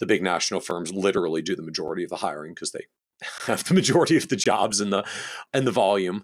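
At 0.71, 1.88, 3.38 and 4.44 s the speech cuts to a block of digital silence of 3.3, 5.8, 17.4 and 17.4 ms, likely an output buffer left unfilled. The waveform shows flat near-silent runs, and the spectrogram shows thin blank stripes edged by broadband streaks.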